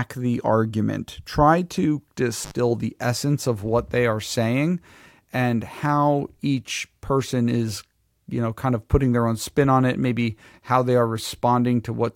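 Intermittent contact at 2.42 to 2.51 s, between "the argument try to" and "the essence of what". A loose plug or cable connection briefly opens, cutting the speech for about 68 ms with crackle at both edges and faint hiss in the gap.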